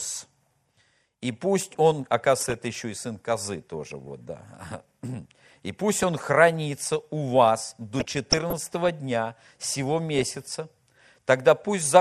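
Across the whole speech clip the sound is dull and plainly gurgling, with a granular edge to the upper range and high bands that seem to drop in and out. That is MP2 compression, likely at a low bitrate; the damage fits something around 80 kbps. With so few bits to share among its 32 sub-bands, the encoder switches off upper bands and quantises the remaining ones coarsely.

Over that, DAB burbling breaks in as short bursts at 2.41–2.54 s, 5.98–6.14 s and 10.19–10.30 s. A longer stretch runs from 7.99 to 8.89 s. Bit errors at a rate of a few tenths of a percent slipped past the error correction into the MP2 data. The corrupted samples put short blips of noise into single sub-bands.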